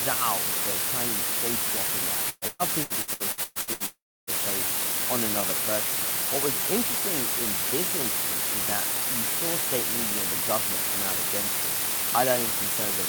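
Two faults run through the whole speech clip. The first is timecode bleed. A chirping warble that alternates between tones near 1 kHz and 2 kHz sits well behind the speech, around 30 dB below it. It flickers at a rate that fits 30-frame-per-second linear timecode leaking in from a neighbouring line. Its rigid, pitched twittering sets it apart from mains hum or a single whistle, because it keeps switching between exactly two pitches and never follows the speech.

The second constant fault is low bit depth with dither. The signal sounds as if it carries only about 3 bits, and dither has turned the rounding error into a steady, even white hiss about 5 dB louder than the speech itself. Without dither, that coarse rounding would sound gritty and distorted, and the grit would come and go with the speech. Here the hiss stays flat and unchanging through the pauses as well.

From 2.29 to 3.83 s comes repeated packet loss, heard as robotic sound. 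The speech turns choppy, with something like nine short holes. Each hole is filled by stretching out the last fragment, and the next one arrives before the sound can recover. Close to half of this span is patched, and the longest single hole lasts about 0.12 s. The constant alternation between real and patched sound is what gives it the stuttering, buzzy character, unlike one long break.

Right after, from 3.86 to 4.30 s, there is a single longer interruption, likely a long network dropout. The last sound drags on as a fading buzz, and then roughly 0.29 s of silence follows. The speech resumes with part of it missing. What separates this from the preceding stretch is that it is one continuous gap that decays into silence, rather than rapid stuttering.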